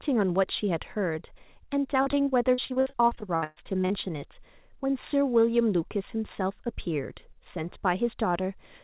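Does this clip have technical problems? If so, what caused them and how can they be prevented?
Yes. From 2.02 to 3.92 s the speech turns choppy and robotic, with missing pieces. This is repeated packet loss (robotic sound): packets kept arriving late or not at all, and each hole, the longest about 121 ms, was patched by stretching the previous sound, so nearly a third of that stretch is filler. The narrowband tone throughout, with nothing above 4 kHz, fits the G.711 call codec and is expected. To prevent the dropouts, give the audio stream a more stable network path, for example wired instead of congested Wi-Fi, and prioritise voice traffic.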